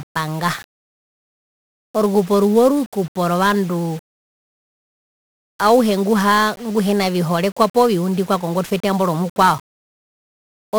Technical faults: 1-bit DFPWM compression

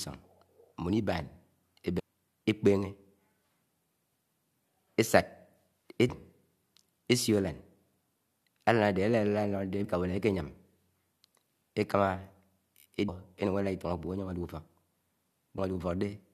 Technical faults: damaged data in a compressed stream

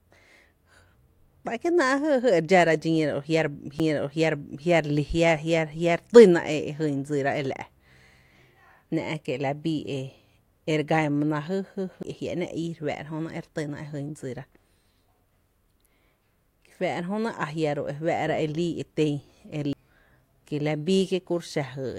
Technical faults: CD skip

